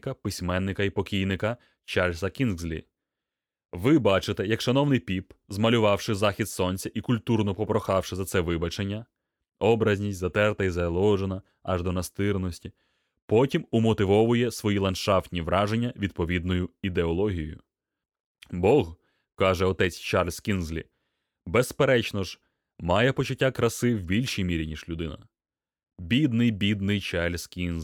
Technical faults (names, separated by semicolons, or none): none